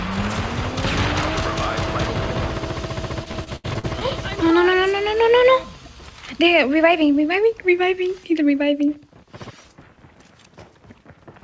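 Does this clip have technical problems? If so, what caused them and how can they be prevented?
Yes. From 3.24 to 4.03 s the sound turns choppy and robotic, with pieces dropping out: this is repeated packet loss (robotic sound). Seven gaps land in that stretch, the longest 75 ms, and about 220 ms of audio went missing. Each hole was patched by stretching the last received sound, so concealment covers roughly 28% of the span. Nothing is heard above 8 kHz, consistent with a wideband call codec such as G.722. Prevent this with a stable, uncongested network and a jitter buffer sized for the link's delay variation.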